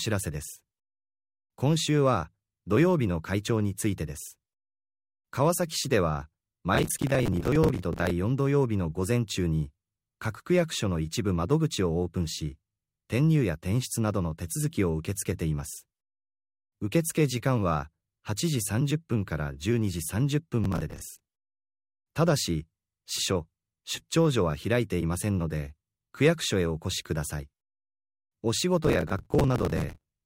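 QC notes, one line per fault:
6.75–8.10 s, 20.64–21.28 s, 28.85–30.12 s: processor overload crackle. Dozens of missed buffers replay stale audio in tiny chunks, likely around 10 ms each, making gritty tearing rather than isolated clicks.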